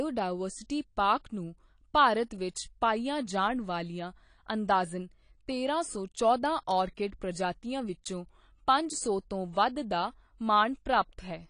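AAC compression runs throughout the speech, from start to finish, and its damage is plainly audible. Nothing reaches above 10.2 kHz, so the top of the spectrum is simply missing. The likely cause is AAC-LC coding at a low bitrate, around 32 kbps. The encoder quantises each frame's frequency lines against a hearing model, and at this rate it drops the highest band and starves or approximates others. The result sounds dull and smeared, with a warbling, fizzy texture on sustained sounds and sibilants.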